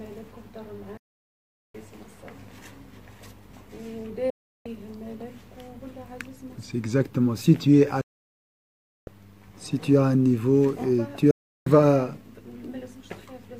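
At 0.97 to 1.75 s, 4.30 to 4.66 s, 8.01 to 9.08 s and 11.31 to 11.67 s, the audio drops to silence in a digital broadcast dropout. The receiver lost valid frames and muted, with a fade of about 3 ms, until good data returned. The gaps last roughly 0.77, 0.35, 1.06 and 0.35 s, and whatever was sent in between is gone. The waveform shows flat silent stretches with abrupt edges, and the spectrogram shows blank vertical bands across all frequencies.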